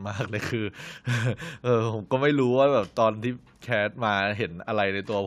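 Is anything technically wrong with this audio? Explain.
No, nothing technically wrong can be heard in this speech recording. There is no fault here to explain.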